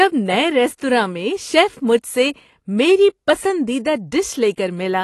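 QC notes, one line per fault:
Throughout, AAC compression: the speech is dull and smeared, with a fizzy edge on sibilants and nothing above 12.1 kHz. The likely cause is AAC-LC coding at a bitrate that fits about 32 kbps, where the encoder drops high frequencies and quantises the rest coarsely.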